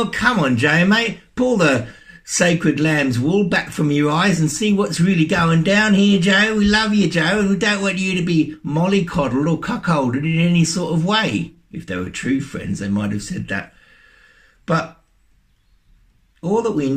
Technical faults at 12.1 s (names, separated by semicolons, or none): repeated stalls (stutter)